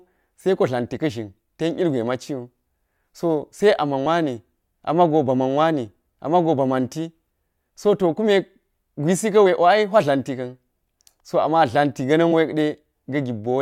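Damaged data in a compressed stream causes brief blips at 4.05 s, before "wani ama̱go bama̱n wani", at 9.45 s, after "kume gwisi", and at 12.31 s, after "amma tla̱nti". Corrupted frames make the decoder lose sync.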